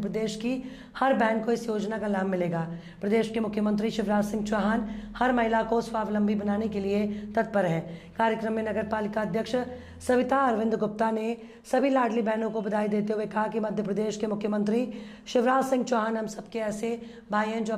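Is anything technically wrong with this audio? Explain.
No, nothing stood out as technically wrong on listening to this audio.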